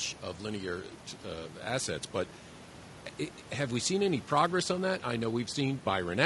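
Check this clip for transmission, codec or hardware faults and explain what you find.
One codec fault runs through the whole speech clip; the room noise, about 21 dB below the speech, is part of the recording. Throughout, low-delay AAC compression, likely AAC-ELD at a rate that fits about 32 kbps, codes each short frame coarsely, so the voice sounds plainly rough and grainy, with noise between harmonics and a lowered or synthetic top band.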